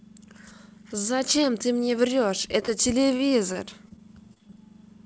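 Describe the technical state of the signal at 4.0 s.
At 4.0 s the speech sits inside a stretch of repeated packet loss (robotic sound), running from 3.08 to 4.58 s. Eight short holes, the longest 24 ms, are patched by stretching the last sound. This covers about a tenth of the span and makes the speech choppy and robotic. Nothing is heard above 8 kHz, which fits a wideband call codec.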